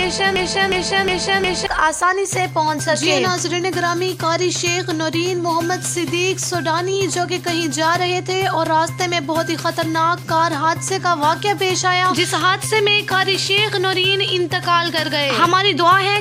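A broken-record loop is already under way at 0.0 s. A 0.36 s fragment repeats four times until 1.66 s, likely from a stalled player or stream.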